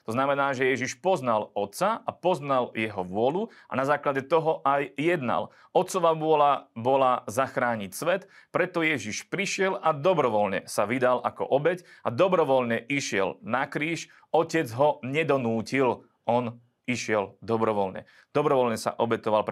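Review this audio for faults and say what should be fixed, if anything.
No faults found; nothing here needs fixing.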